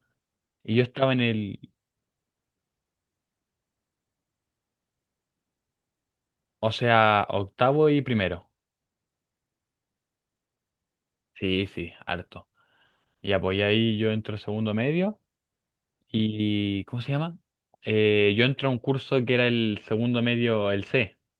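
No technical faults are audible.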